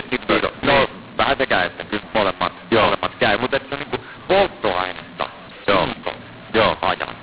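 From start to end, the speech carries a mu-law and A-law mix-up. It was coded as mu-law but decoded as A-law. Levels come out scrambled, some too loud and some too soft. The voice sounds harsh and gritty. Pauses fill with noise instead of silence.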